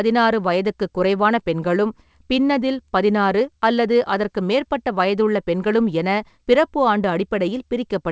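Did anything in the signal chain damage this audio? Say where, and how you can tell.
No, nothing in the chain damaged this speech. It went through a call path whose wideband codec, consistent with G.722, leaves nothing above 8 kHz, which is that codec's normal band limit.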